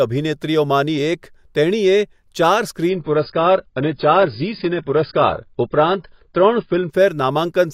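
From 2.9 s to 6.9 s the speech abruptly turns dull and swirly: everything above about 5.1 kHz vanishes, sibilants lose their edge, and warbling artefacts appear, then full quality returns just as suddenly, with no gap at either switch. This is an adaptive stream at a lower bitrate. The player dropped to a much leaner encoding for those four seconds, and the sound fits AAC-LC falling from roughly 96 kbit/s to around 16 kbit/s.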